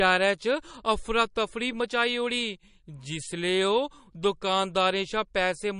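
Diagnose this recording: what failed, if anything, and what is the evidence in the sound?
The codec stage likely failed here: MP3 compression. The speech has nothing above 10.6 kHz throughout, with plainly watery, swirly artefacts, which fits a starved bitrate around 40 kbps.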